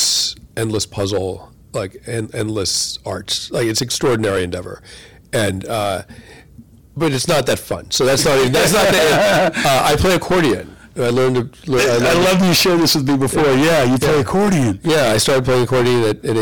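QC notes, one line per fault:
throughout: hard clipping. The speech is pushed about 19 dB past what the stage can pass, so nearly a third of the waveform is sitting flat against the ceiling. With that much squared-off signal the tops pile up harmonics well up into the high frequencies, and you get a harsh, buzzy fuzz riding on every loud syllable rather than the odd crackle on a peak. It's baked in through the whole clip.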